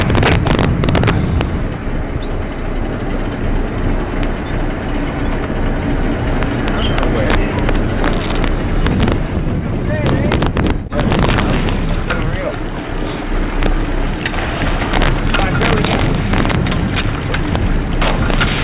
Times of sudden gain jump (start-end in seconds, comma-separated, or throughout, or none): none